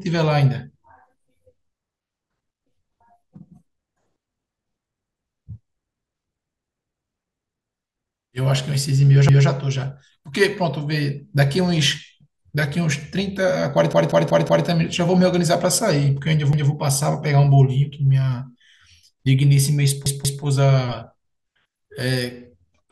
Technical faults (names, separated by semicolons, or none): repeated buffer